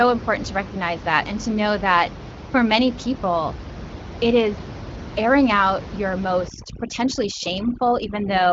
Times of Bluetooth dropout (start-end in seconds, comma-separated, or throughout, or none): none